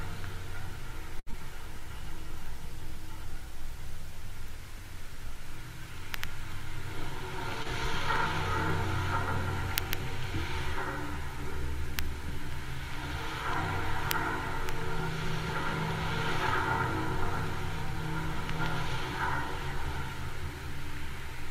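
Short stalls from a late packet occur at 1.19–1.30 s and 7.62–7.68 s in this recording of everyday sounds. Each time the jitter buffer ran empty, and the receiver stretched the last sound for 73 ms and then 27 ms until the packet arrived, resuming from the same point with nothing lost. Short concealed packet loss follows at 1.31–1.36 s: 40 ms of audio never reached the decoder in time, so the receiver bridged the gap with 22 ms of continued sound, a brief smear, and the playout delay shrank by roughly 20 ms. A jitter buffer speed-up runs from 17.16 to 20.54 s. The buffer held more audio than its target, so the receiver cut out short pitch-period-length pieces repeatedly, trimming about 70 ms and playing the sound at 102% speed with unchanged pitch.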